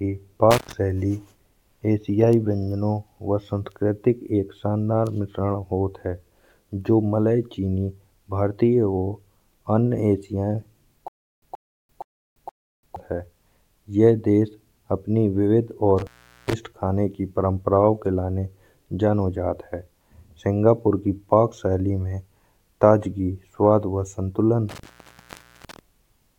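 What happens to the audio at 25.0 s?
That's an intermittent contact from 24.69 to 25.79 s: a loose plug or cable opens for about 0.81 s, so the speech cuts out with crackle at both edges and faint hiss.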